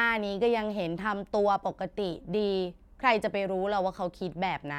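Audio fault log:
No faults heard in this speech.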